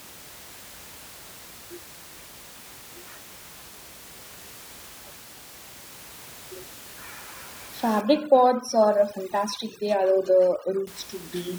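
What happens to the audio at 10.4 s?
At 10.4 s the sound is inside a stretch of overdone noise removal running from 8.01 to 10.87 s. The reduction is set so hard that frequency bands near the estimated noise floor are pulled almost to zero, taking the quieter parts of the speech with them. The room noise, normally about 21 dB below the speech, collapses into near silence with twinkling specks. On a spectrogram the background shows as dark gaps scattered with isolated bright dots, and the speech harmonics look ragged, with their weaker edges cut away.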